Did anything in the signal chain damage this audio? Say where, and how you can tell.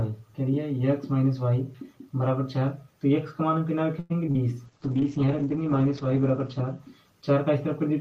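Yes. Call audio freeze, 3.99 to 4.12 s, at the network and jitter-buffer stage. The sound doesn't break off. Instead the last moment is drawn out for about 105 ms, and then the audio carries on from exactly where it paused, with nothing dropped. The whole stream now runs about 105 ms later than before. The likely cause is packets held up in transit, so the jitter buffer emptied and the receiver had to improvise until they arrived.

Short concealed packet loss, two overlapping events: 4.26 to 4.38 s and 4.31 to 4.37 s, also on the network side. About 20 ms and then about 40 ms of real audio never reached the decoder in time. The decoder patched each hole by extending the preceding sound, covering about 12 ms and 36 ms, and then crossfaded back. That leaves a brief smear or wobble where the original detail should be, with the timeline nudged by a few milliseconds.

Call bitrate drop, 4.67 to 7.55 s, at the codec stage under congestion control. 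The encoder went from 32 kbps down to 9 kbps and stayed at the bottom for about 1.6 s. At that rate Opus codes more coarsely and narrows the audio band from 20 kHz to 8 kHz. So the sound turns muffled and rougher, losing its top end, until the rate recovers near the end.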